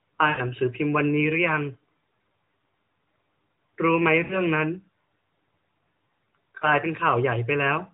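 Lost AMR speech frames at 0.30–0.41, 4.24–4.42 and 6.58–6.68 s: the decoder repeats the last good frame with falling gain, smearing the speech into a brief, drawn-out fade before it returns.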